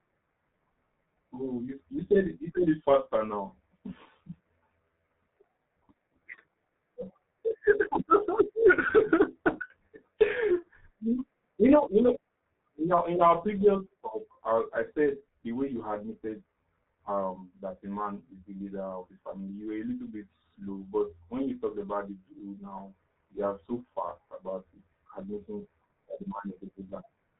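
Throughout, the speech sounds muffled and hoarse, with smeared consonants and nothing above 3.8 kHz, typical of heavy G.723.1 codec compression at roughly 6 kbit/s.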